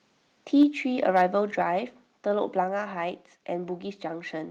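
From 0.60 to 0.63 s the loudest part of the speech turns harsh and crackly, the sound of microphone overload, most likely from an input volume set high enough that peaks ran about 2 dB past the converter's limit. In the waveform those peaks show flattened, squared-off tops across roughly a tenth of the samples in that stretch. On a spectrogram the clipping appears as a brief smear of broadband energy reaching up toward the 12 kHz ceiling that the call codec imposes.

At 0.63 s the microphone volume is stepped down, likely by the call software reacting to that clipped peak. Voice and background fall together by about 2 dB in a single step. The waveform envelope shrinks abruptly at that instant, and the spectrogram darkens evenly across all frequencies rather than in any one band.

The reduced gain does not fully prevent clipping. From 1.16 to 1.22 s a second microphone overload adds the same gritty edge, again about 2 dB over the limit. 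This time only a small share of samples, around 3 percent, is flattened, so the squared tops in the waveform are fewer and the spectral splatter is fainter.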